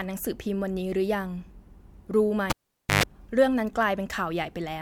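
A speech recording where, at 2.5 s, a pop cuts the sound to near silence for about 480 ms, then a roughly 117 ms burst of 50 Hz buzz and a second pop bring it back by 3.03 s: a live cable pulled and plugged in.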